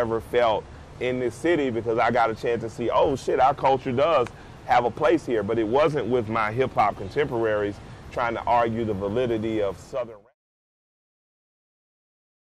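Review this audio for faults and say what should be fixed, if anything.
Nothing here needs fixing, and the gentle fade-out starting around 9.5 s and finishing by about 10.35 s is a normal edit.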